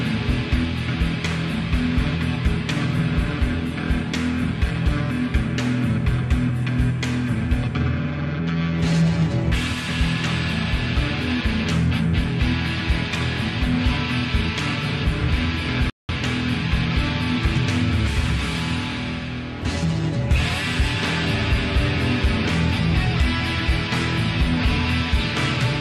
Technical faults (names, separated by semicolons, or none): playback stall